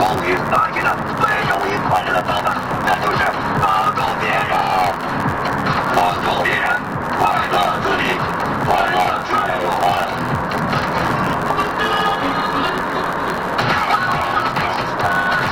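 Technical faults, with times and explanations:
throughout, block size mismatch (truncated): block tails are discarded, causing a 91.9 Hz buzz and 1.07x speed-up with timbre kept, unlike a sample-rate mismatch; fits 512-sample writes.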